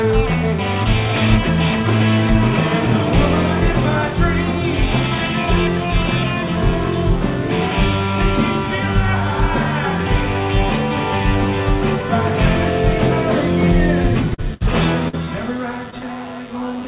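At 14.02 to 14.06 s and 14.34 to 14.40 s, short concealed packet loss leaves brief smears where 20 and 40 ms went missing. The decoder extended the preceding sound, so it is a blur rather than a silent dropout.

At 14.54 to 14.62 s, a burst of packet loss removes about 60 ms. Unlike the shorter smears, the patch becomes a held, fading buzz or hiss, and the audio resumes further on.

From 15.08 to 16.05 s, repeated packet loss produces choppy, robotic sound. Five gaps, the longest 46 ms, cover about 14% of the stretch. Their recurrence sets this apart from one isolated hole. The narrow band, with nothing above 4 kHz, points to a G.711 call path.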